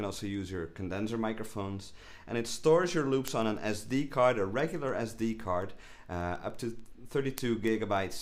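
From 0.2 s to 8.11 s, word clock ticks recur roughly every 0.15 s, around fifty in all. The receiving device runs on its own clock, off by roughly 150 ppm. Each slip drops or repeats one sample, heard as a sharp tick.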